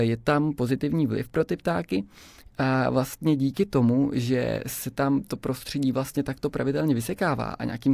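Nothing technically wrong can be heard anywhere in this speech recording; the signal stays steady throughout, with no audible fault at any point.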